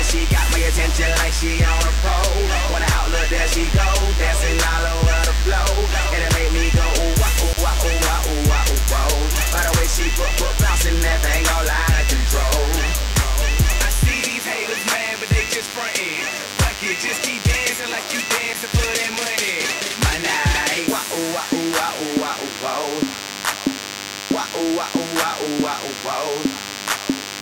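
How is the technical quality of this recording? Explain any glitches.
The recording is marred by one fault running throughout. DECT cordless phone buzz: a nearby handset's 100 Hz radio bursts get rectified into a thin, steady buzz roughly 10 dB below the sound, showing as evenly spaced harmonic lines on a spectrogram.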